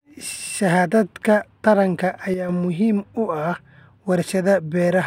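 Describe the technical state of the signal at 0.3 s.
At 0.3 s the speech signal is intact, with no audible fault at that moment.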